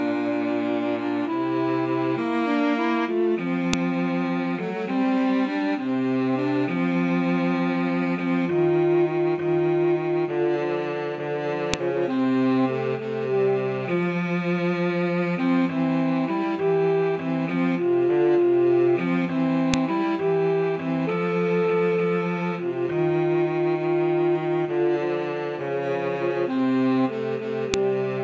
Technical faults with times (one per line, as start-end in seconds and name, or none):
3.73 file header played as audio
11.74 file header played as audio
19.74 file header played as audio
27.74 file header played as audio